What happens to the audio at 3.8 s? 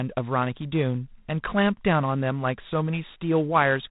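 At 3.8 s the speech carries a harsh, rasping hiss that rises and falls with its level, over a band that stops at 4 kHz. This is G.726 ADPCM coding, present across the whole clip. Each sample is coded as a few bits of difference from an adaptive prediction. The coarse steps leave quantisation noise that tracks the signal, and the plainly audible damage fits the 24 kbit/s mode.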